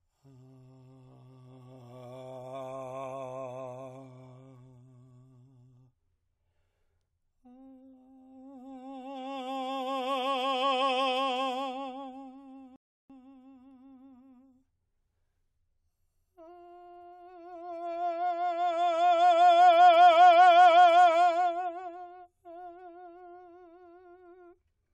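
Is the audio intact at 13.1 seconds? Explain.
No. A rebuffering stall from 12.76 to 13.10 s adds about 0.34 s of silence while the player waits for more data. The music then resumes exactly where it stopped. Unlike a dropout, no audio is lost.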